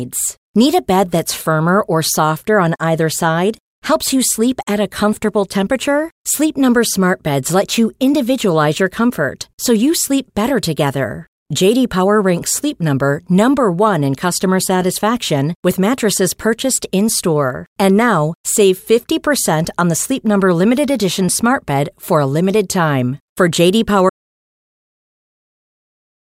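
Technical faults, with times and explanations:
24.10 s to the end, audio dropout to silence: the input signal was most likely lost, through a disconnected device, a failed link or a mute, while recording carried on writing silence. The speech cuts off mid-flow into total silence with no room tone, and never returns.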